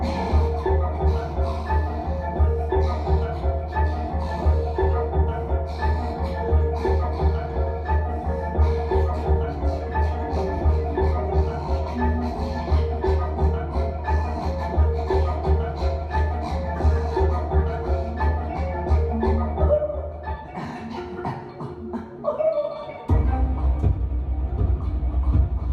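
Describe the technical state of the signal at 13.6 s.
At 13.6 s the signal is intact, with no dropout, distortion or other audible fault at that point.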